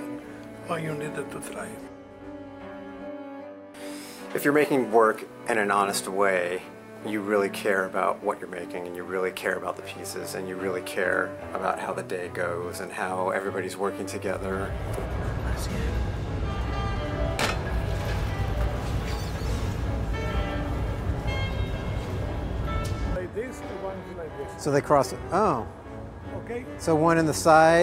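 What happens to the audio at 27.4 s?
Nothing goes wrong at 27.4 s; the audio plays through that moment intact, with no dropout, click or distortion.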